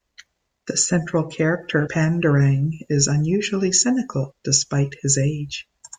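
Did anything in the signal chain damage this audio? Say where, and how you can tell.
Yes. At 1.87 s the speech jumps forward abruptly, as if a short slice had been cut out and the two sides spliced together with no gap. That is the signature of audio missing between chunks, likely from the driver or buffer stage handing audio over in blocks of about 2.5 s and dropping roughly 50 ms while closing one block and opening the next. The sound simply skips ahead at that one point.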